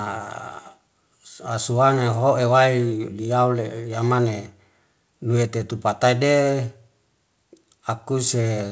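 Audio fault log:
No faults are present; the speech has come through a WebRTC call path using the G.722 codec at 64 kbps, so its content stops at 8 kHz, the top of that codec's wideband range.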